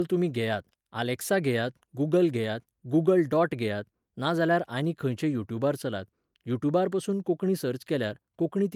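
Nothing stood out on listening to this speech recording.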